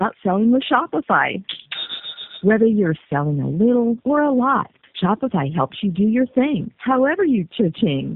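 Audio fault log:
throughout, tandem speech coding: the speech has been squeezed through a low-rate codec, opened back up, and squeezed again, and you can hear the damage pile up. It's rougher, more muffled and more warbly than any single pass would leave it, which fits three speech coders in a row, G.729A, AMR-NB and G.729A again, each chewing on the previous one's artefacts. Nothing survives above 3.8 kHz, so it's firmly narrowband.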